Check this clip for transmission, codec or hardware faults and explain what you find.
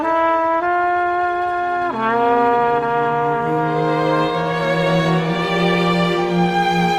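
No transmission, codec or hardware faults turn up anywhere in the clip.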